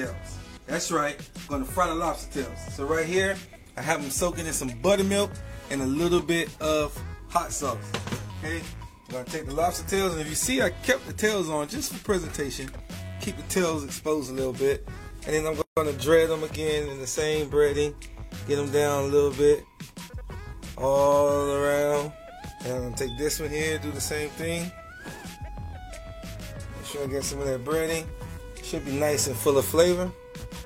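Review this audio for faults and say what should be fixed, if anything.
Gap at a join of encoded pieces, 15.62 to 15.77 s: separately encoded segments were spliced untrimmed, leaving encoder delay and end padding as a 150 ms hole before sound resumes.

Prevent it by trimming each piece's encoder delay and padding before joining, or by encoding the whole programme in one pass.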